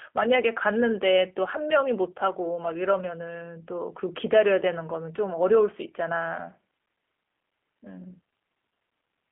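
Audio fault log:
throughout: G.729 codec. Speech sits in a narrow 200 Hz to 3.4 kHz band and is rebuilt from a vocal tract model, a pitch predictor and a few pulses per frame. This leaves a plainly audible roughness and synthetic edge that fits an 8 kbit/s G.729A link.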